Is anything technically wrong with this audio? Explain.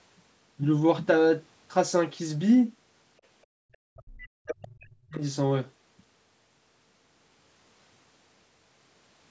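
Yes, there are two related faults, both inside one stretch of the clip.

Speech suppressed in double talk, 3.73 to 5.22 s: the speech dips and breaks up for about a second and a half, falling by about 40 dB at its deepest. The likely cause is an echo canceller that turned everything down while both sides spoke at once. On the waveform, the envelope pinches to near silence in places. On a spectrogram, the harmonic bands fade or vanish in patches.

Other side's voice leaking through, 4.49 to 4.64 s: a short scrap of a second voice sounds, about 15 dB below the main speech. It is likely residual loudspeaker echo that the canceller failed to remove. A spectrogram shows a faint, separate harmonic trace inside the suppressed gap, and the waveform shows a small burst there. Here the call's microphone processing leaves nothing above 8 kHz.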